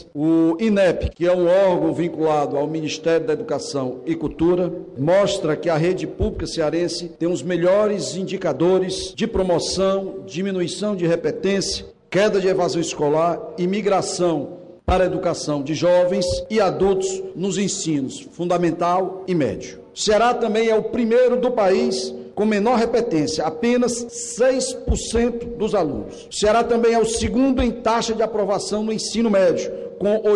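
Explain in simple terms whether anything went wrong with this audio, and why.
Nothing went wrong here: the signal stays steady and intact the whole way through, with no technical faults to point to.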